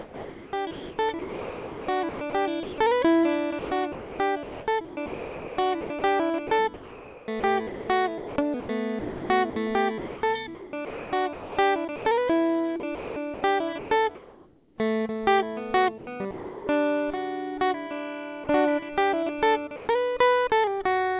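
Music is heard through a call path with nothing above 4 kHz. From 0.0 to 2.78 s, 3.59 to 12.05 s and 12.8 to 14.78 s, the sound is chopped by the voice detector. The detector likely kept switching off on quieter musical passages. About 1.8 s, 3.8 s and 1.1 s of music become steady synthetic hiss.

From 15.98 to 16.67 s, comfort noise takes the place of the background. The sender likely judged the passage to be background and stopped sending. About 0.45 s of the real background becomes flat, featureless noise. It sounds smoother than what surrounds it.

Sound dropped by the voice detector follows at 16.31 to 16.67 s, 18.44 to 18.47 s and 19.76 to 19.88 s. The detector likely mistook music for background each time. About 0.36 s, 0.03 s and 0.08 s of music vanish into steady noise before the sound returns.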